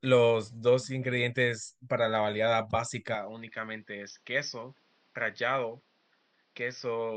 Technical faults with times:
3.15-7.17 input switched to a poorer device

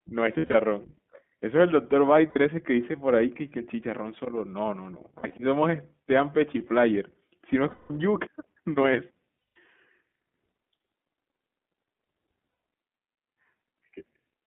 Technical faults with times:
0.00-14.47 iLBC codec
0.38-0.55 lost iLBC frames
2.30-2.37 lost iLBC frames
5.17-5.35 lost iLBC frames
7.70-7.92 lost iLBC frames
9.39-9.56 lost iLBC frames
12.49-12.62 lost iLBC frames

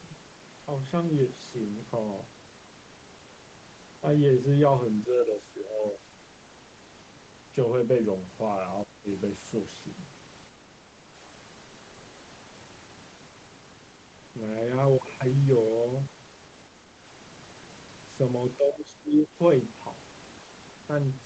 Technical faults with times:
8.84-9.08 speech suppressed in double talk
18.58-19.35 speech suppressed in double talk

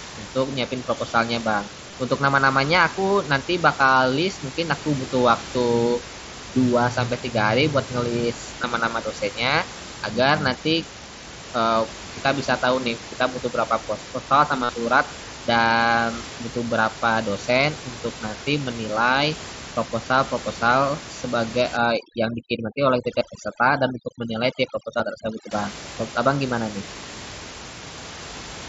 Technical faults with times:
1.91 concealed Bluetooth headset packet loss
8.62 concealed Bluetooth headset packet loss
14.64-14.69 concealed Bluetooth headset packet loss
21.77-25.51 overdone noise removal
23.19 concealed Bluetooth headset packet loss
24.98 concealed Bluetooth headset packet loss
27.19 concealed Bluetooth headset packet loss

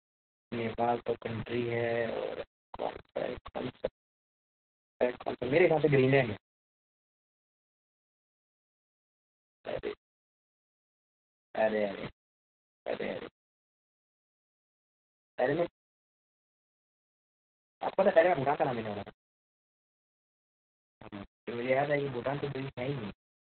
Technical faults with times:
0.00-23.55 low bit depth without dither
0.00-23.55 Opus voice compression
5.01-8.01 time-compressed catch-up
15.75-17.75 playback stall
17.75-20.75 time-compressed catch-up

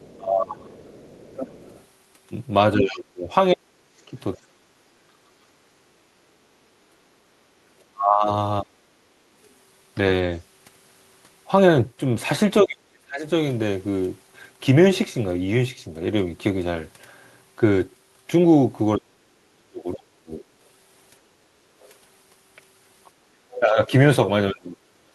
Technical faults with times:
0.00-4.37 other side's voice leaking through
0.17-8.77 speech suppressed in double talk
7.24-7.58 background gated by the echo canceller
12.64-13.26 speech suppressed in double talk
18.96-20.44 speech suppressed in double talk
21.82-23.60 other side's voice leaking through
23.60-25.15 speech suppressed in double talk

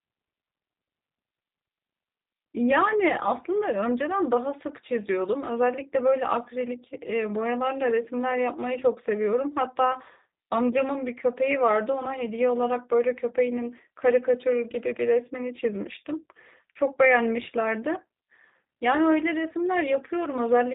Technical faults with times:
0.00-20.74 G.729 codec

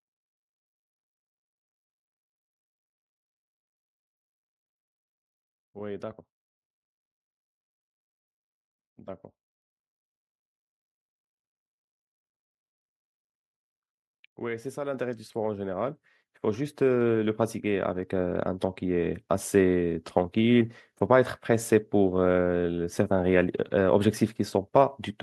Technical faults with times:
14.94 microphone volume stepped up
15.96 microphone volume stepped up
18.03 microphone volume stepped up
19.05 microphone volume stepped up

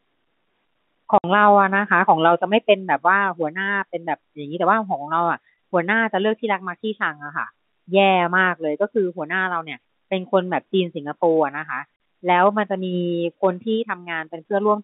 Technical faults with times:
1.18-1.24 packet loss filled with silence
11.96-12.00 packet loss filled with silence

